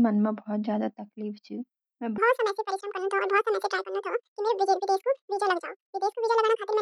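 From 2.18 s to the end, the speech plays at the wrong speed, 1.88 times fast and about ten semitones high, likely a clock mismatch.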